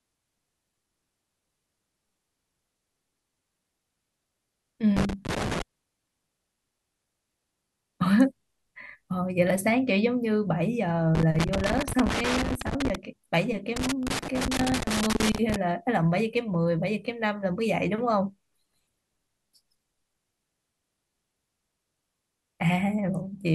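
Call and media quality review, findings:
Loose connector crackle in speech, three irregular bursts: 4.97–5.62 s, 11.15–12.95 s, 13.76–15.56 s. Scratchy, chopped texture. Probable component: worn or dirty jack or cable contact. Mechanism: contact intermittently opening under movement, chopping the signal. Check and reseat or replace the connector and cable.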